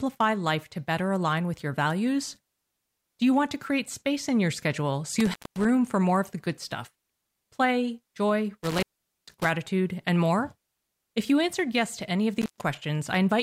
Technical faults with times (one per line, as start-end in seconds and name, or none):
5.20-5.65 intermittent contact
8.63-9.45 intermittent contact
12.41-12.63 intermittent contact